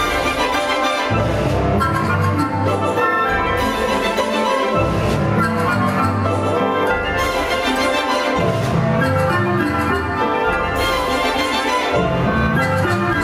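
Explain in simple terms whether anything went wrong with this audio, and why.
Throughout the clip, loud and soft parts end up closer in level, so the sound seems squashed. This is gain pumping, likely caused by setting the microphone level far too high so that a fast limiter keeps pulling it down.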